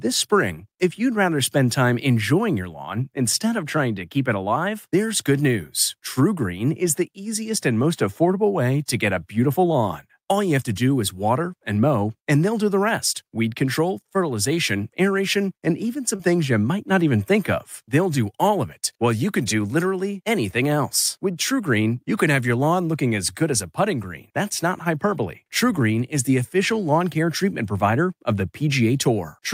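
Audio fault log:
16.15–16.21 s, short concealed packet loss: a brief smear right after "fertilization aeration and even", where 40 ms of audio never arrived and the decoder bridged the gap by continuing the preceding sound.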